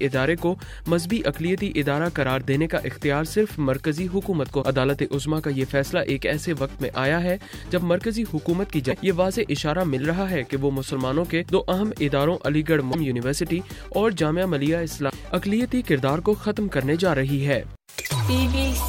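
Short glitches occur at 4.61–4.64 s, 8.90–8.93 s, 12.92–12.95 s and 15.09–15.12 s. Each lasts about one 26 ms frame. The sound skips ahead there. The likely cause is a broken MP3 bit reservoir: frames after a cut read borrowed bytes from the wrong frame.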